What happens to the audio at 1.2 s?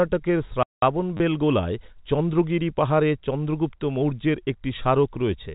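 Packet loss with last packet repeated runs from 1.17 to 1.20 s: about 30 ms of lost audio is filled by replaying one short packet, giving a brief robotic stutter rather than the silent gap of a plain dropout.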